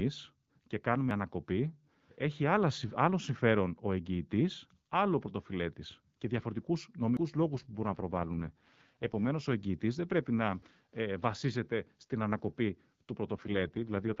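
At 1.11 s, just before "ανακοπή έχει άλλο συμφέρον", the speech jumps ahead by about 40 ms. This is a dropped buffer, likely an overrun. The samples were overwritten before being read, so the two sides butt together with no silence. The same skip recurs at 7.17 s, after "άλλο πρωτοφυλέτης και διαφορετικού", losing about 100 ms. From 7.55 to 9.32 s the speech turns rough and synthetic with no gap or loss of band. This AMR rate drop fits the codec stepping down from 12.65 to 6.6 kbit/s. At 10.62 s another skip removes about 100 ms. After "ε βασίζεται στην ανακοπή", from 13.33 s to the end, the same raspy rate drop returns.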